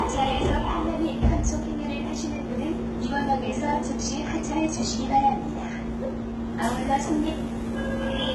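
Sounds throughout the clip come across dull, with nothing above about 11.8 kHz and the artefacts of the earlier encoding still present. This is low-bitrate audio saved at a high bitrate, likely a very low-bitrate HE-AAC encoding re-saved as high-bitrate MP3, which cannot restore what was lost.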